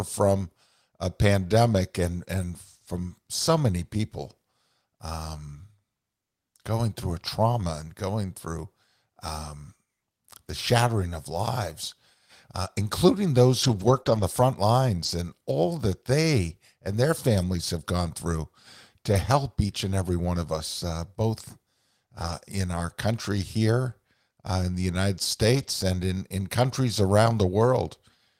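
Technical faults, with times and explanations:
2.41, 13.63–14.01, 14.07–14.21 (just before "the front"), 15.05 (between "the front" and "and all that they"), 17.41 (between "that they and their" and "have gone through"), 19.13, 22.23–22.33, 25.55–25.69 s: lost packet rebuilt from error correction. No gaps occur. The rebuilt audio turns rough and noisy instead. A low-bitrate backup copy from the next packet filled each loss. The longest run lasts 200 ms.
14.03–14.07 s: short concealed packet loss. About 20 ms never arrived, and no backup copy existed. The decoder extended the preceding sound for about 12 ms, then blended back. The result is a brief smear between two rebuilt stretches.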